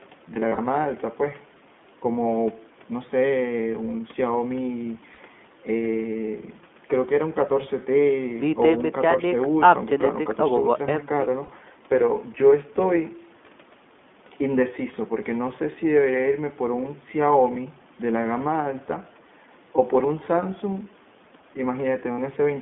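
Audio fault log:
throughout: iLBC codec. The band is confined to roughly 200 Hz to 3.5 kHz, with a plainly rough, synthetic edge from independently coded 20 ms frames, consistent with about 15.2 kbps.
0.34–0.59 s, 5.14–5.18 s, 11.44–11.49 s, 22.12–22.20 s: lost iLBC frames. Brief buzzy held-vowel fills appear where the decoder repeats the last pitch cycle with noise. The first span holds several short losses, each around 40 ms at most. The others last 40, 40 and 60 ms, and the sound recovers immediately afterwards.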